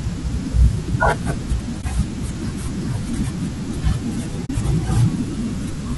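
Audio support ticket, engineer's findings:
Likely low-delay AAC compression (AAC-ELD) throughout. Coarse quantization at a rate that fits about 32 kbps leaves the speech rough and grainy, with noise between harmonics.

AAC frame loss with muting at 1.81–1.84 s and 4.45–4.50 s. The decoder zeroed the missing spectrum, leaving a brief dip and a soft-edged hole: about 20 ms (one frame) and 40 ms (two frames).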